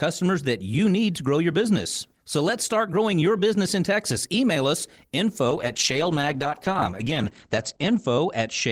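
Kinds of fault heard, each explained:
call bitrate drop: from 5.49 s the speech turns coarse and muffled, fitting a 32 to 14 kbps fall; spectrogram energy stops flat at 8 kHz.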